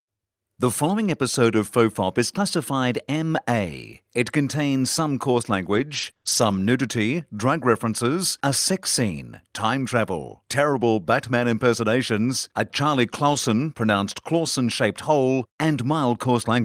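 Scattered short gaps appear from 5.73 to 6.59 s, after "contains some coarse" and before "nudity drug references a". About three packets went missing, none longer than about 20 ms. The receiver filled each hole by stretching the preceding sound, leaving brief ticks and smeared hiccups.

A lost packet rebuilt from error correction follows at 13.29 to 13.39 s. Rather than a gap, about 60 ms plays from the low-bitrate backup copies carried in the following packets, which points to a few lost packets. Those stretches sound rougher and noisier.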